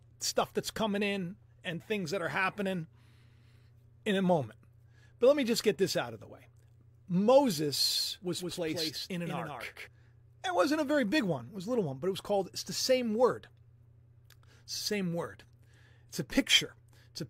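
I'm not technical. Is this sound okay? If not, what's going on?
No. From about 7.91 to 9.87 seconds, the speech sounds doubled, as if a second, slightly quieter copy trails just behind the first, roughly a sixth of a second late. It starts and stops abruptly, with no fading echo or room sound. This is a doubled audio track: the same recording is mixed in twice, out of step, likely because it was picked up a second time by a slower route or left duplicated in an edit.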